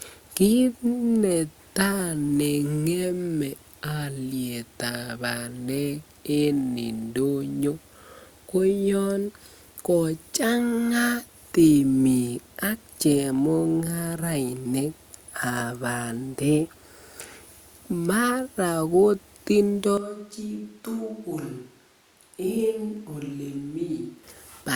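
Speech that, from 19.98 s to 24.24 s, abruptly turns hollow and roomy, drops about 10 dB in level and loses its low end, with background noise rising to around 30 dB below the speech. The sudden change in and out points to a switch to a distant microphone, likely because the close mic's signal dropped out. The waveform shows a sharp step down in amplitude, and the spectrogram shows a thinner bass band and a brighter noise floor between words.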